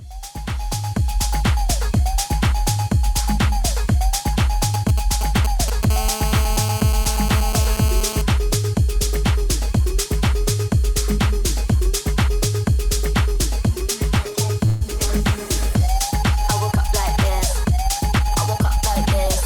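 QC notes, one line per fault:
4.74–5.85 s, GSM signalling bursts: a galloping dit-dit-dit of short buzzes at 217 Hz, sitting around 10 dB below the wanted sound. A nearby 2G handset is sending only brief groups of radio bursts while it signals to the network, and some stage of the audio circuit rectifies that RF envelope into audible clicks. Because the bursts come in clusters rather than continuously, the interference stutters instead of holding a steady tone.
5.90–8.22 s, GSM phone buzz: a hard, raspy buzz at 217 Hz, rich in harmonics and unrelated to the programme, at about 10 dB below the signal. The same handset has moved into an active call and now transmits a burst 217 times a second without pause. Demodulation of those pulses in the audio path turns the burst rate into a continuous fundamental, and the sharp pulse edges produce the dense harmonic rasp.
14.66–14.82 s, call audio freeze: the sound is held and stretched for about 146 ms, carrying on as a decaying continuation of what came just before, with no silence and nothing dropped. 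When playback resumes it picks up exactly where it stopped. This is likely a jitter buffer running empty while packets were delayed in transit, so the receiver concealed the wait and the end-to-end delay grew by that same 146 ms.
17.39–19.27 s, jitter buffer speed-up: the audio runs about 4 percent fast at unchanged pitch. After a backlog built up in the jitter buffer, the receiver shortened its stored audio to bring the delay back down, cutting out small slices one or a few pitch periods long many times in succession. About 70 ms in total is removed across this stretch, so timing tightens while pitch stays put.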